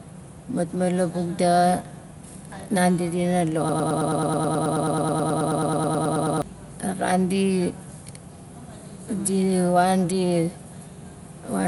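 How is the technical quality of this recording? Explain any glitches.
The technical quality is poor: the whole recording carries plainly audible codec damage, and a stretch near the middle is stuck in a loop.

Throughout, the speech sounds dull and rough, likely from Dolby Digital compression at a low bitrate, fitting roughly 64 kbps. The encoder drops the top band and starves many frequency lines of bits, so they are refilled with noise. A spectrogram shows nothing above 11.5 kHz and grainy, fluttering texture around harmonics.

From 3.69 to 6.42 s there is a broken-record loop. The stream likely stalled and kept resending one fragment of about 107 ms, back to back, so the same sliver stutters for nearly three seconds while the real audio is lost. The waveform shows one short shape repeated identically.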